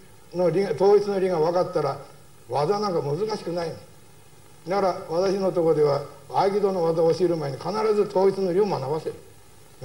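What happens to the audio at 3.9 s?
Nothing goes wrong at 3.9 s: the audio plays through that moment intact, with no dropout, click or distortion.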